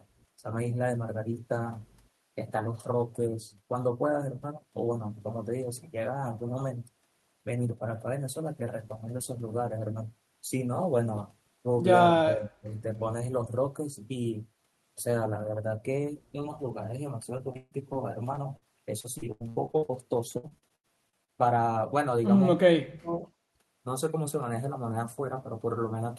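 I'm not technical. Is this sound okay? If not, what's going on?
No. From 12.24 to 12.73 s and again from 22.73 to 23.24 s, the speech suddenly sinks very low for about half a second, then comes back. This is likely speech suppressed in double talk: the call's echo control mistook the talker for returning echo while both sides spoke, and turned the talker down.

Three stretches, 17.37 to 17.97 s, 19.00 to 19.92 s and 20.37 to 21.30 s, sound choppy and robotic. This is repeated packet loss. Pieces of audio kept failing to arrive, and each hole was patched by stretching the last sound. About a third of each stretch is filler. The gaps come in quick succession, up to eight per stretch, so the roughness lasts instead of being one blip.

At 18.35 to 18.39 s there is a tiny smear or wobble. This is short concealed packet loss, a hole of only a few hundredths of a second that was smoothed over. 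Unlike the robotic stretches, it is a single isolated moment.

At 18.57 to 18.66 s a slightly longer burst of packet loss occurs. The sound holds or fades briefly, then jumps ahead, so a small piece is skipped outright rather than just smeared.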